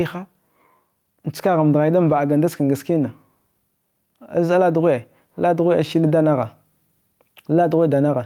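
The input gain is likely set far too high, with a fast limiter or compressor pulling it down on each loud sound, causing gain pumping throughout the speech. The gain swings by about 5 dB under louder passages, squashing the dynamics.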